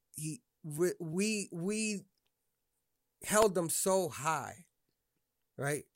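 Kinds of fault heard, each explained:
Electrical switching spike: a single sharp snap at 3.42 s, just before "them so high", likely from a nearby switch or motor arcing onto the line. The waveform shows a needle-thin spike of about -15 dBFS, and a spectrogram shows a thin bright vertical line.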